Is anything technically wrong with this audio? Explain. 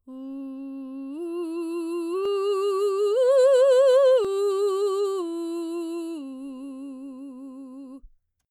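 Yes. The music has two tiny skips, at 2.25 s and 4.25 s, about 2 s apart. This is overlap between stream segments: two segments, which appear to be 2 s long, claim the same time span, and the trimmed overlap removes about 19 ms and 11 ms, so the waveform jumps.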